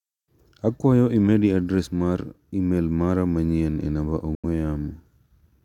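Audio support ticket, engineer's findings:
Speech drops to silence from 4.35 to 4.45 s, then resumes further on, as if it kept playing. Likely Bluetooth dropout: packets missed the headset deadline and about 85 ms of audio was lost, which fits roughly four frames. Waveform shows a flat gap; spectrogram shows a blank vertical band.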